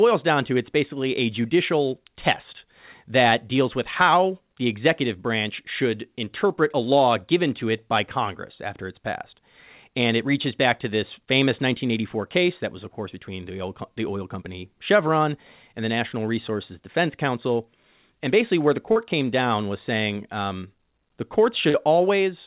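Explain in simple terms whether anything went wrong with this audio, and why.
Short concealed packet loss at 18.92 s, just after "basically where the", and at 21.70 s, after "was saying um the". Each time about 40 milliseconds of the call arrived too late, so the receiver patched the gap by stretching the preceding sound, leaving a brief smear.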